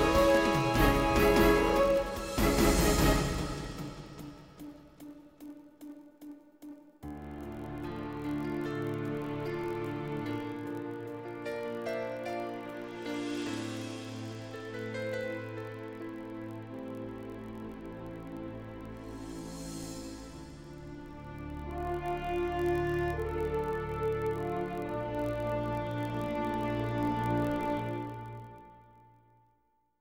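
The audio has a block size mismatch (padded) running through the whole clip. A steady buzz sits under the sound at 43.1 Hz. That rate fits a 1024-sample read block at 44.1 kHz. Each block arrives slightly short, and the missing part is filled with silence. These repeated tiny dropouts make the buzz. The padding also stretches time. The audio plays at 0.999 times normal speed.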